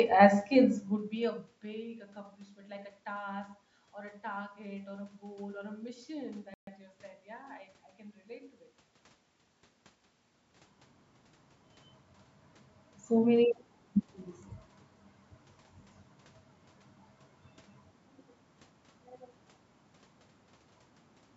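A playback stall runs from 6.54 to 6.67 s, right after "or a mission" and before "you said". The speech cuts out abruptly mid-flow, leaving a gap of about 133 ms of silence before the sound resumes. This is likely the player running short of buffered data, or its audio thread being held up, so nothing reached the output until the stream was fed again.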